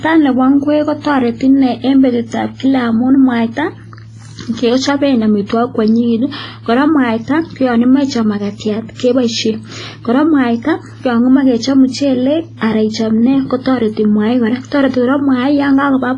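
Throughout the speech, the sound rings and turns washy, with a hiss that swells and fades alongside it and nothing above 10.5 kHz. The likely cause is heavy WMA compression: long transform blocks smear quantisation noise across time, and the damage fits a bitrate around 24 kbps.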